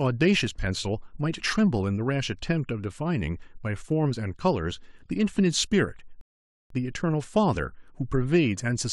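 At 6.21 s the speech drops into silence for about half a second, then picks up at 6.71 s exactly where it broke off, with nothing skipped. This is a rebuffering stall: playback used up its downloaded audio and waited for more, adding 0.49 s.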